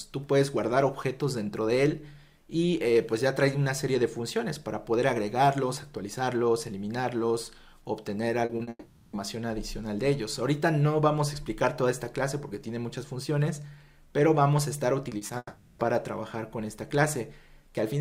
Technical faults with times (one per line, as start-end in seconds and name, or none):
8.45-8.69 short concealed packet loss
8.69-9.15 long network dropout
15.09-15.31 short concealed packet loss
15.37-15.81 long network dropout